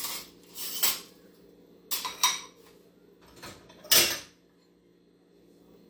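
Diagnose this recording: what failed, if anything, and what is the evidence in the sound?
Nothing failed here; I can't hear any problem at any stage of the chain in these everyday sounds.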